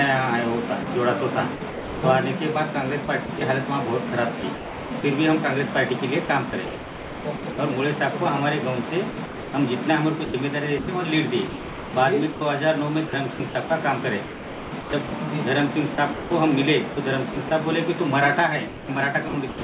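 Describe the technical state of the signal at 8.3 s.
At 8.3 s the audio is intact, with no dropout, glitch or distortion, just the steady band-limited sound of a G.711 call path that carries nothing above about 4 kHz.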